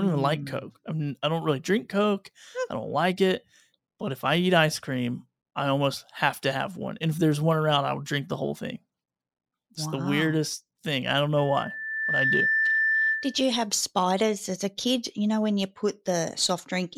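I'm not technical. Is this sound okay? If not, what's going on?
No, there's a problem. From about 11.38 to 13.50 seconds you get a loudspeaker feedback squeal. The microphone is picking up the speaker it's feeding, so one pitch loops round and round, getting louder each pass. Here it's a high whistle at about 1.8 kHz that swells up in under a second and ends up louder than the speech itself, then stops at 13.50 seconds.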